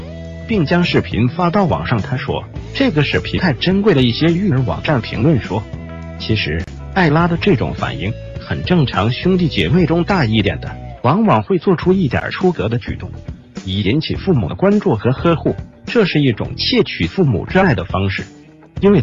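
A brief hole of about 33 ms opens from 6.64 to 6.68 s, and a shorter dropout of about 12 ms at 12.20 s, each with smeared edges before the sound resumes where it stopped. These are gaps at joins of encoded pieces, where separately encoded segments were spliced without trimming their leading delay and final-frame padding.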